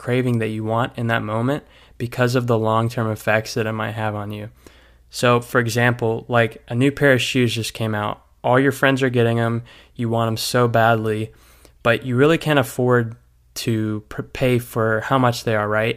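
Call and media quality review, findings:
No call or media quality faults found in this speech recording.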